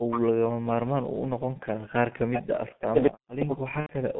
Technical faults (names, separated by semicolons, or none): G.723.1 codec; speech suppressed in double talk; echo leak; VoIP packet loss concealed by the speech codec